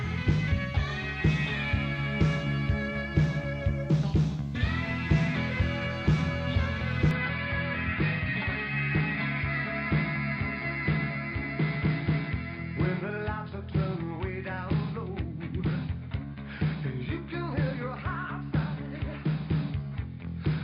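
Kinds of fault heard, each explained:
Input switched to a poorer device: from 7.11 s to the end the sound abruptly turns duller and boxier, with nothing above 5 kHz, a level drop of roughly 5 dB, and a faint new background noise sitting far below the signal, all with no gap at the change. This is likely the system moving its input mid-recording to a different, narrower-band microphone or headset profile, which brings its own limited bandwidth, tone, gain and noise floor.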